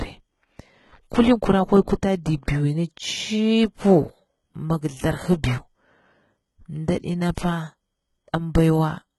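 Throughout the speech, the top end stops dead at 11.8 kHz, yet the treble below that sounds synthetic, with gritty, lispy s sounds. That points to HE-AAC compression, likely at a heavily damaging low bitrate near 16 kbps, rebuilding treble from copied lower bands rather than simply dulling it.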